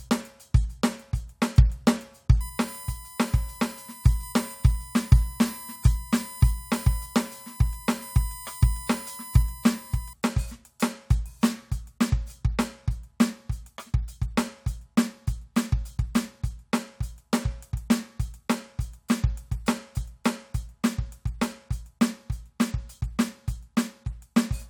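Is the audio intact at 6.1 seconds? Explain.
No, USB whine runs from 2.41 to 10.13 s: the bus's 1 ms frame current leaks through power or ground, adding a steady 1 kHz whine roughly 20 dB below the music.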